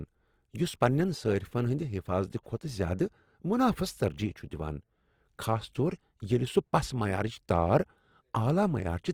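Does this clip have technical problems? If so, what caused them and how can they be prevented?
Yes. Throughout the speech, the sound is grainy and rough, likely from Opus compression in its music mode at a bitrate that fits about 24 kbps. A spectrogram shows energy reaching about 20.2 kHz with few holes, but upper bands look smeared and noise-filled. Encoding speech at a higher bitrate, or in Opus's speech mode, would prevent it.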